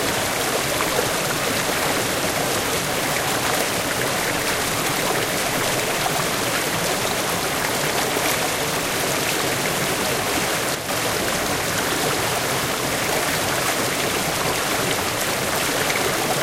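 From 10.75 to 10.89 s, the sound drops abruptly by about 6 dB, then returns. This is likely one channel dropping out, halving the mono sum briefly.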